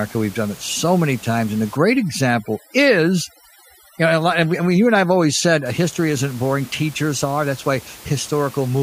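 From 1.77 to 5.66 s there's overdone noise removal: the reducer is clamping bands near its noise estimate, so the background drops to twinkly near-silence. The room noise, about 22 dB under the speech, is part of the recording.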